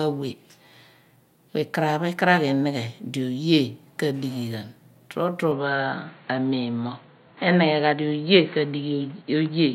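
At 5.51 s the speech suddenly turns dull and boxy, and it stays that way to the end. Nothing above 4.4 kHz remains. A faint new background noise appears, well below the speech. The loudness stays about the same, and there is no gap at the change. This is likely an input switched to a poorer device in mid-recording. The new microphone passes a narrower band and brings its own tone and noise floor.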